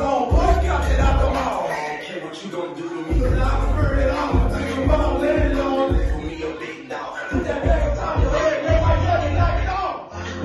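From 7.82 s to the end, the treble abruptly vanishes above about 6.9 kHz and artefacts thicken without a gap: the adaptive stream dropped to a lower bitrate.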